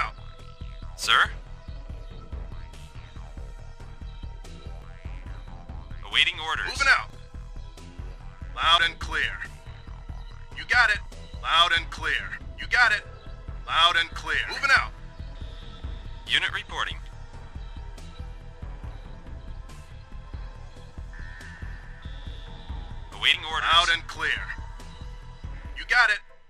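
At 2.52, 4.82, 7.1, 8.78, 11.06 and 23.34 s the audio jumps abruptly forward, with no gap of silence, as if a short piece had been snipped out and the edges butted together. The skips are small, mostly around 40 ms, with the one at 7.1 s nearer 70 ms. The likely cause is a dropped buffer (overrun): the capture side fell behind, so whole blocks of samples were overwritten before being read and simply lost.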